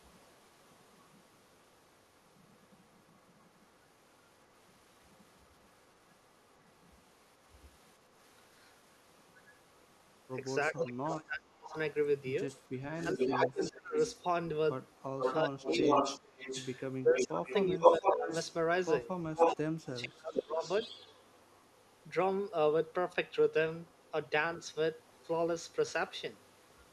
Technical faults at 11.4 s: speech suppressed in double talk

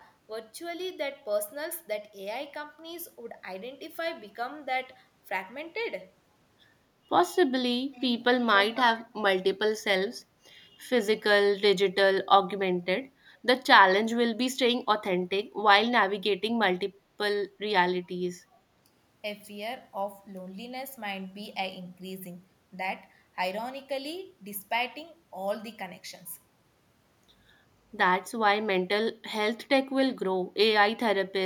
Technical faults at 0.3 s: none

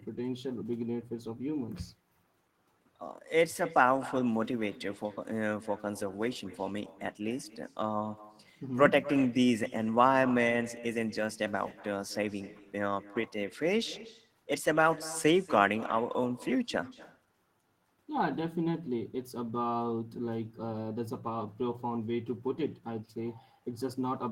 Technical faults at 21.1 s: echo with no canceller

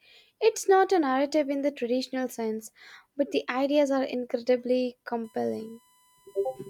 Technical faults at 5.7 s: USB whine

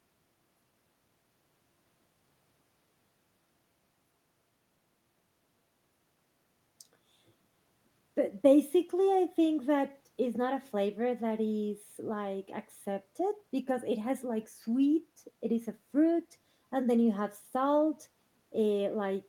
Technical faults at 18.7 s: none

